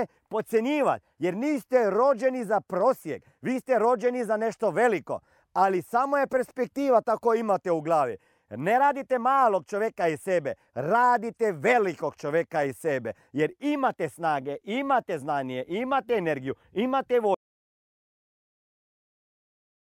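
At 17.35 s the speech stops abruptly, mid-flow, and the clip runs on in complete silence for its last 2.5 s or so. This is an audio dropout to silence: there is no room tone, hiss or tail of decay, only silence, which points to the input having been lost while the recorder kept writing. The likely cause is a disconnected device, a failed link or an accidental mute. Whatever followed is not recoverable.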